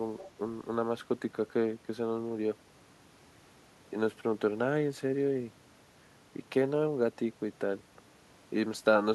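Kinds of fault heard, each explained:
Other side's voice leaking through: the echo canceller likely missed loudspeaker playback, so a faint second voice, about 20 dB down, surfaces from 0.19 to 0.29 s.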